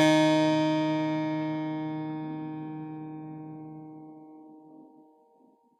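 From start to finish the music carries plainly audible HE-AAC compression damage, likely from a low-bitrate stream around 20 kbps. Unlike a simple low-pass, the treble stays bright up to a hard ceiling near 14.6 kHz, but it is rebuilt from copied lower bands, so the high end sounds gritty and metallic.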